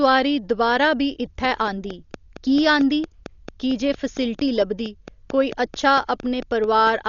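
A speech recording carrying heavy Dolby Digital compression throughout: the band stops at 7 kHz, and the dull, rough quality with fluttering noise around voiced tones points to a very low bitrate, around 40 kbps, where the encoder starves many frequency lines and the decoder fills them with noise. From 1.45 s to 6.88 s a train of clicks runs at a regular 4.43 per second, around thirty near-identical ticks peaking roughly 5 dB above the speech and audible in pauses too, likely interference from nearby equipment or a faulty connection or power supply.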